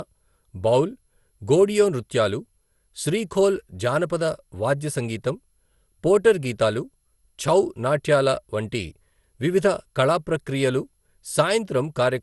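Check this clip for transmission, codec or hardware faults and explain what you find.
One fault runs through the whole recording: generation loss. The speech sounds swirly, hollow and smeared, with blurred attacks, likely from around seven re-encodes consistent with MP2 at 96 kbit/s. Each pass re-quantises on a shifted frame grid, piling up noise. A spectrogram shows nothing above 11.9 kHz.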